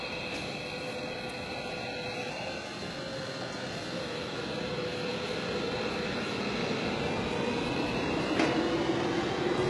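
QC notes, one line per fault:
Throughout, HE-AAC compression: gritty, metallic treble and nothing above 11.5 kHz, since copied-up lower bands fake the highs; likely a heavy encode around 12 kbps.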